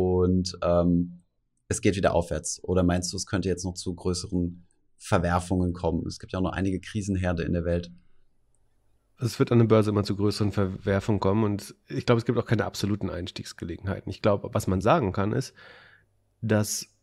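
No technical faults are audible.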